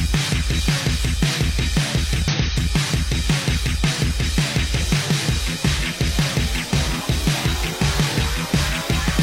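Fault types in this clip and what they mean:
Damaged data in a compressed stream: some of the encoded bytes got mangled, so the decoder couldn't make sense of those frames, lost its place and had to hunt for the next valid frame header before carrying on. You hear it as a brief blip cutting into the sound, once from about 2.28 to 2.35 s and again from about 9.06 to 9.12 s, each lasting well under a tenth of a second.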